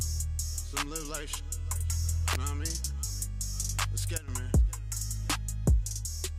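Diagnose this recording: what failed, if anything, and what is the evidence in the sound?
An electrical switching spike, most likely from a nearby switch, motor or static discharge arcing and coupling into the analogue wiring, entered the signal path between 2.33 and 2.35 s. The interference does not come from the source itself. It lands on top of the sound as a sharp, dry snap lasting under 30 ms, a tight burst of clicks. The underlying sound continues unchanged beneath it.

A sudden gain jump at 4.18 to 4.28 s likely comes from a digital gain setting or bit shift applied in the driver or processing stage without a ramp. The level drops by about 12 dB almost instantly. Both the sound and the background noise fall together, which rules out a change at the source and points to a gain stage downstream.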